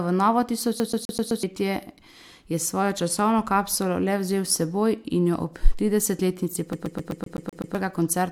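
Right after "v novo", from 0.80 to 1.43 s, the speech hits a CD stuck on one turn: a scratch keeps knocking the laser back a track, so a 0.13 s slice replays five times, each jump marked by a brief mute. The same fast, even stutter returns from 6.73 to 7.75 s, eight repeats. A waveform shows identical blocks separated by tiny gaps, and a spectrogram shows the same pattern stamped out at regular intervals.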